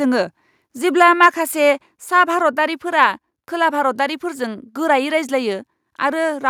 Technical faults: microphone overload; microphone volume stepped down

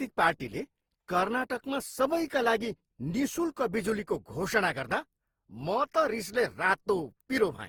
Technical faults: generation loss

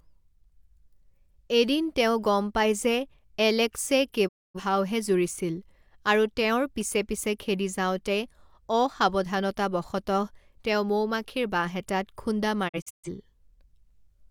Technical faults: digital broadcast dropout

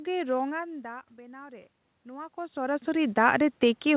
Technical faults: automatic gain rising

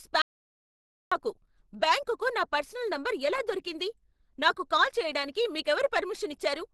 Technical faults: Opus compression; audio dropout to silence

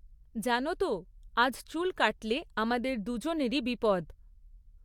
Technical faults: none

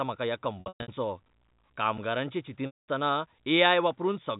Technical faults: packet loss with pitch repetition; gap between chunks

